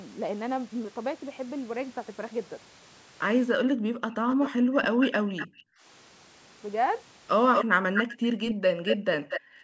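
The clip is speech with two recurring faults. The background is gated by the echo canceller from 3.55 to 5.85 s and from 7.71 s to the end. In those stretches the room sound drops away, by about 40 dB at its deepest. It returns when the canceller releases. In total the room sound is missing for around a second and a half in the first stretch and about a second in the second. A delayed copy of the speech also trails the talker, 232 ms behind, from 4.29 to 5.47 s and again from 7.53 to 9.41 s. In the first passage it sits well below the direct speech. In the second it is only about 5 dB quieter and easier to hear. This is likely an echo leak: the far side's loudspeaker output reached its microphone, and its echo canceller did not remove all of it, so the copy was sent back.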